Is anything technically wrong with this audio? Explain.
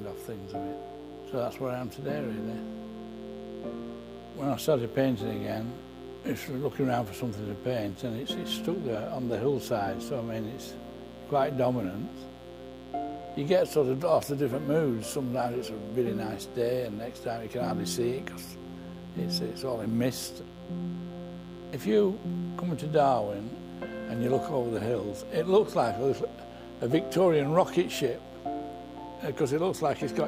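Yes. A mains buzz runs through the whole clip, start to finish. It sits roughly 20 dB below the wanted sound. The base frequency is 60 Hz. Something in the chain, such as a dimmer, a rectifier or a missing shield, lets sharp switching spikes through twice per mains cycle. Those spikes stack harmonics of 60 Hz up into the kilohertz range. The result is a steady, raspy buzz rather than a smooth hum.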